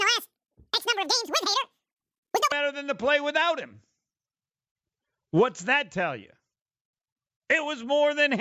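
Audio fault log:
0.00–2.52 s, wrong sample rate: the speech comes out squeaky and rushed, a full octave (12 semitones) too high and running at twice normal speed, until it settles to natural pitch and pace just before "than the play without". Speed and pitch rise together because the samples are being read out twice as fast as they were captured, with no rate conversion. A 2:1 ratio like this fits 16 kHz audio played at 32 kHz.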